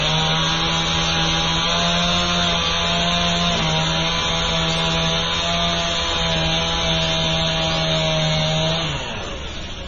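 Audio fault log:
Throughout: MP3 compression, likely at a very low bitrate near 24 kbps. Nothing remains above 8.3 kHz, and weak frequency content flickers in and out between frames, giving a heavy watery, swirling texture with metallic chirps on bright sounds and smeared attacks.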